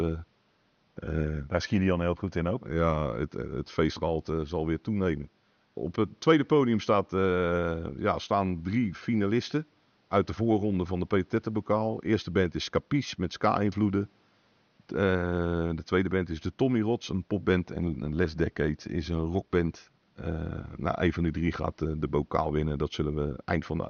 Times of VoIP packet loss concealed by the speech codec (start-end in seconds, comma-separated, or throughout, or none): none